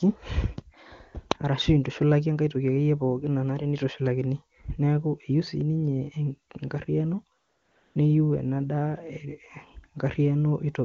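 From 7.37 to 7.95 s, the sending phone decided the talker had gone silent and stopped transmitting speech frames for about 580 ms, so the receiver substituted AMR comfort noise built from a rough estimate of the background's level and spectrum. The real room sound drops out and a smooth, even hiss takes its place, then switches off abruptly as the speech resumes with "niyu ena". The surrounding speech, carried over the AMR wideband (HD Voice) codec, sounds clean, which points to one of its higher rates.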